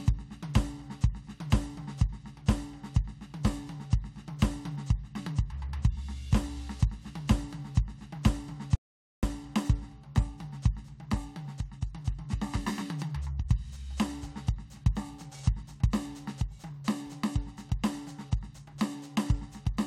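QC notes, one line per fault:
8.75–9.23 s, audio dropout to silence: input likely lost while recording continued writing zeros, so the music cuts to total silence for about 0.48 s.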